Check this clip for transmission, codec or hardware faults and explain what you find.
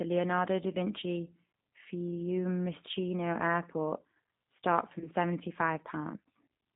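Two faults are audible: a low-bitrate speech codec colouring the whole clip, and one short dropout patched over by that codec.

Throughout, the speech sounds thin, slightly rough and synthetic, boxed into a band of roughly 150 Hz to 3.7 kHz with nothing bright above it. This is the G.729 codec, and the damage is plainly audible. It discards the waveform and sends only a vocal tract filter, a pitch predictor and a few pulses per 10 ms frame. That sparse rebuild, which fits an 8 kbit/s G.729A stream, produces the grainy, artificial texture.

From 4.99 to 5.09 s the speech briefly smears into a stretched, buzzy or noisy sound that sags in level before normal speech resumes. This is VoIP packet loss concealed by the speech codec. About 20 ms of audio went missing, consistent with two lost 10 ms frames. The decoder filled the gap by repeating its last pitch and filter settings at falling gain. 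Because each frame builds on the previous one, the voice stays weak and distorted past the gap itself, until about 5.09 s.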